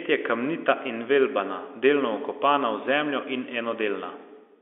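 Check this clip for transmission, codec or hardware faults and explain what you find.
No transmission, codec or hardware faults are present.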